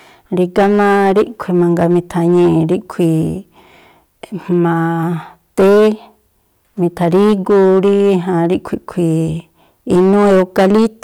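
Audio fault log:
Throughout: hard clipping. The speech is driven about 9 dB past what the stage can pass, so peaks get sliced flat and roughly 7 percent of samples sit pinned at the ceiling. Those squared tops throw harmonics up high, hence harsh fuzz on loud syllables.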